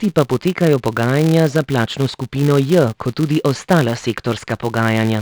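From start to finish, the speech carries a regular buzz at 200 Hz, the signature of a filter restarted on every block. Instead of carrying its internal state across block boundaries, the filter begins each block from silence, so a small transient appears at every boundary. Repeating 200 times per second, these transients fuse into a buzz, which points to blocks of about 5 ms. The buzz rises and falls with the level of the speech.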